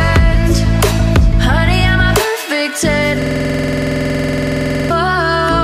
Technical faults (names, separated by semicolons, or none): system hang loop